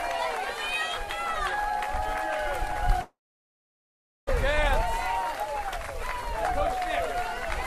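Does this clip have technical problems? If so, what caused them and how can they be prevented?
Yes. A long network dropout runs from 3.01 to 4.29 s. The last sound before the gap is stretched into a fading buzz, which soon gives way to about 1.1 s of silence. When audio resumes at 4.29 s, roughly 1.26 s of material is simply gone. The likely cause is a stall in packet delivery that the receiver's concealment could only briefly mask. A steadier connection, with larger jitter buffers and forward error correction, helps prevent this.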